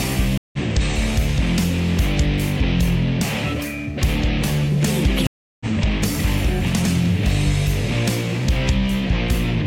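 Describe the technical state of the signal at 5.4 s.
At 5.4 s the audio is in a dead gap: sound stops at 5.27 s, stays silent for about 0.34 s, and resumes at 5.66 s, picking up roughly 0.4 s further along than where it left off, with its first moment muted or fading in. This is a stream reconnect. The connection dropped, playback went quiet, and the player reconnected and started a fresh decoder partway through the stream, so the audio skips ahead.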